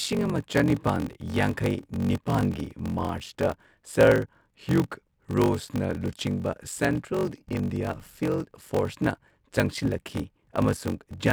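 Throughout the speech, a block size mismatch (padded) leaves a short silent gap in every block, producing a steady buzz at 46.9 Hz, which fits a 1024-sample read. The speech runs at 0.861 times its normal speed but keeps its timbre, unlike a sample-rate error.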